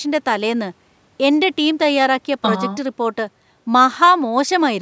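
No technical faults can be heard anywhere in this speech. The call microphone processing is audible only as its normal traits: the lowest bass is trimmed by its high-pass filter, and nothing reaches above 8 kHz.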